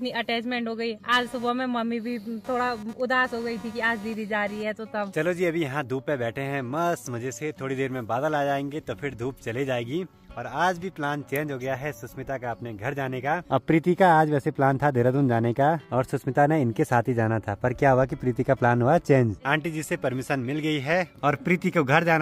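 Computer activity noise runs from 1.12 to 4.63 s: a buzzy, chirping rattle pulsing at around 200 Hz, sitting roughly 25 dB below the sound. Processor or graphics load shifting the audio circuit's shared ground causes it, so it tracks machine activity rather than the audio.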